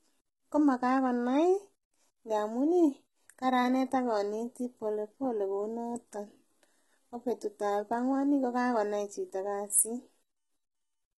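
HE-AAC compression runs through the whole speech clip, with nothing above 11.8 kHz and gritty, metallic s sounds. The treble is likely rebuilt by band replication at a bitrate near 16 kbps.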